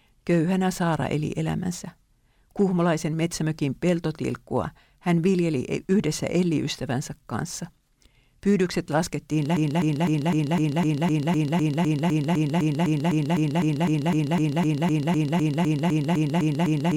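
At 9.57 s the speech locks into a broken-record loop: a fragment of about 0.25 s repeats exactly and back to back, roughly 29 times, and runs to the end of the clip. The result is a rapid, mechanical stutter with no forward progress, and everything that should have followed in those last seven seconds is missing. The likely cause is a stalled player, encoder or stream that kept resending the last fragment it held.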